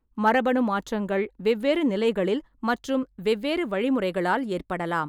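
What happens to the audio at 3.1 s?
Nothing goes wrong at 3.1 s; the speech there plays through intact, with no dropout, click or other fault.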